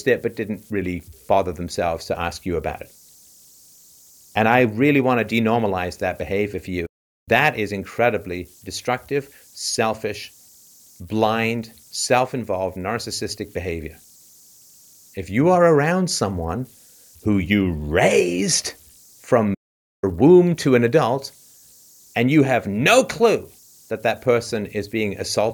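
Converter idle tones run throughout. A faint whistle around 7 kHz sits about 34 dB below the speech, from an undithered delta-sigma converter cycling through repeating bit patterns.

Playback stalls follow. The sound drops out from 6.86 to 7.29 s, after "that behavior for", and from 19.54 to 20.04 s, before "womb to an adult". The gaps last about 0.41 s and 0.48 s, likely from the player running out of data.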